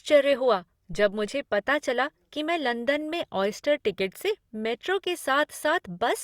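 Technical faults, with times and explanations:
0.93–1.35 s, phantom power thump: a supply was switched on a live input, and the voltage step passed through the coupling capacitors as a deep low-frequency thump that decays in about 93 ms, just before "पता चला कि मैं".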